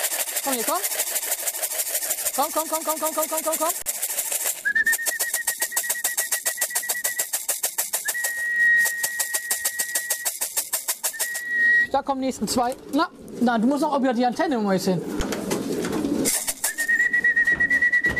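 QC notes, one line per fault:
3.82–3.86 s and 15.2 s: underrun with held sample. The output buffer ran dry for 40 ms, then 10 ms, and the converter held its last value. The waveform shows a flat line and the spectrogram shows a blank strip. Playback resumes where it stopped, so the re-entry is soft.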